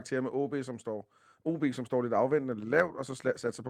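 Speech, with one short flaw near the end. From 2.87 to 2.89 s, a 20 ms stretch turns briefly rough and noisy. There is no gap or dropout. This is a lost packet rebuilt from error correction. The sound points to a single lost packet. The following packet carried a low-bitrate backup copy of it, and the decoder played that copy in its place. Continuity was kept, but the rebuilt slice has lower detail and audible grain.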